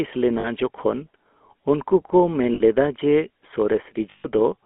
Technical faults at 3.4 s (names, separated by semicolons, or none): GSM full-rate codec